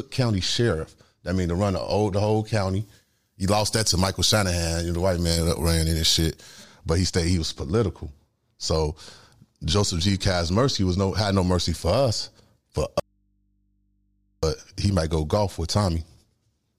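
From 2.81 s to 6.64 s, just after "the old the whole", the speech turns thin, bright and hissy on the sibilants. This is pre-emphasis left on: the treble lift applied ahead of recording or transmission was never undone by the matching de-emphasis. The tilt follows the 50 µs FM curve, putting 10 kHz about 10 dB above 1 kHz, so the upper consonants sit too far forward until the balance returns at 6.64 s.

At 13.00 s, after "mercy for us for", the speech cuts off abruptly for 1.43 s and returns at 14.43 s with "he might go golf". This is an audio dropout to a faint residue. The gap holds only mains hum, roughly 45 dB below the speech level, with no fade at either edge. The likely cause is a loss of the source signal while the downstream path stayed live, leaving the open input's hum exposed.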